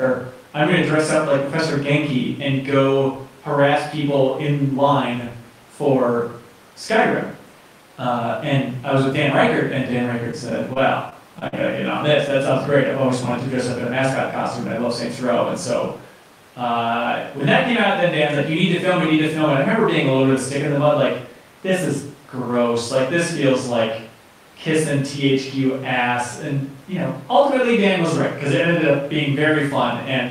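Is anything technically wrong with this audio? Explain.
Yes. From 10.31 to 11.54 s, repeated packet loss (robotic sound) breaks up the speech. Six short gaps, up to 51 ms, get patched with repeated sound, giving choppy, robotic artefacts.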